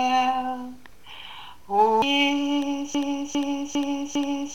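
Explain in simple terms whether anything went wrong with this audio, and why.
Two things go wrong here. At 2.02 s there's a quick chirp or blip, the sound of damaged data in a compressed stream. A bit of the file got corrupted, so the decoder couldn't read that moment properly, lost its place, and hunted for the next clean chunk to lock back onto. You hear a tiny glitch, and the sound may skip ahead.

Then at 2.95 s a broken-record loop starts and runs to the very end. The same stretch of about 0.4 s plays four times in a row, exactly the same each time. That likely means the player or stream stalled and kept repeating the last piece it had, so whatever should have come after 2.95 s never plays.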